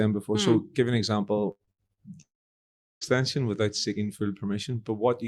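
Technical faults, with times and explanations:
1.51–2.00 s, repeated packet loss (robotic sound): choppy, robotic stretch where five gaps, the longest 82 ms, were patched by extending the previous sound, so about half the span is concealed.
2.21–3.04 s, long network dropout: a short smeared continuation fades into about 0.75 s of silence, then sound resumes with roughly 0.8 s missing, likely from audio that never arrived.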